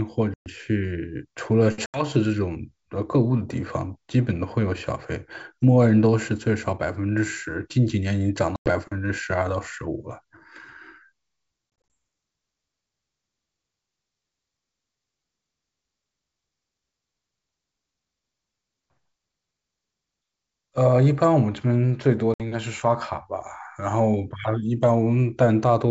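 Packet loss on an ADPCM call cuts holes into the speech at 0.34 to 0.49 s, 1.86 to 2.03 s, 8.56 to 8.70 s, 11.90 s (scattered gaps over 200 ms, longest 20 ms) and 22.34 to 22.42 s. Each gap is silence where a few packets went missing, and the decoder's predictor and step size lose step with the sender. Speech resumes slightly distorted and settles within some tens of milliseconds. The waveform shows flat, square-edged dropouts, and the spectrogram shows blank vertical strips across the full 7 kHz G.722 band.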